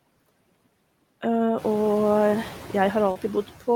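All the way through, you can hear noise suppressor artifacts. The suppressor pulls the background down by about 18 dB, so the noise drops out between phrases and swells back under the speech. The room noise climbs about 12 dB around the middle of the clip.

Then at 3.11 to 3.17 s there's a short concealed packet loss. Roughly 40 ms of audio never arrived, and the receiver papered over the gap by stretching the preceding sound for about 38 ms before blending back in. It comes through as a quick smear or wobble.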